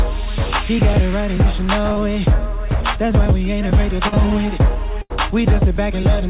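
At 1.92 s and again at 4.08 s there is a short concealed packet loss, each about 40 ms of audio that never arrived in time. The receiver bridged each hole by extending the preceding sound, then crossfaded back, so both moments come across as a quick smear or wobble lasting until about 1.98 s and 4.14 s. On a spectrogram each shows as a brief stretch where the preceding sound is carried on and slightly blurred; the waveform looks too regular there.

At 5.02 s a burst of packet loss removes about 80 ms, running to about 5.12 s. The concealment again carried the last sound forward but faded it as the gap lengthened, giving a held buzz or dwindling hiss before the audio jumps ahead with that portion gone. A spectrogram shows frozen, smeared bands that thin out and darken. The waveform envelope sags, then snaps back to fresh material. Throughout, nothing appears above 4 kHz, consistent with a G.711 mu-law call path at 64 kbps.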